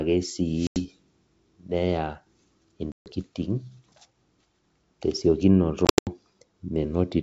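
Packet loss on an ADPCM call leaves hard-edged silent holes at 0.67–0.77 s, 2.92–3.12 s and 5.85–6.09 s, the last scattered into short gaps. Afterward the decoder's predictor and step size disagree with the sender's, so speech returns slightly distorted, then settles.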